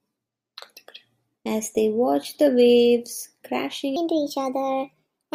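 From 3.96 s on, a section plays at the wrong speed, likely a clock mismatch. The speech runs 1.3 times fast, about five semitones high.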